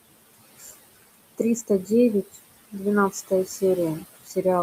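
Noise suppressor artifacts run through the whole clip. The suppressor pushes down the bands it judges to be steady noise by about 19 dB, frame by frame, so the room noise, sitting about 14 dB below the speech, sinks in the gaps and swells back under words.

Speech cut by the noise suppressor occurs at 0.59–0.72 s, 1.67–1.9 s, 3.11–3.62 s and 4.24–4.45 s. The suppressor mistook parts of the speech for noise and lowered them by about 12 to 17 dB, swallowing roughly 100 to 150 ms each time.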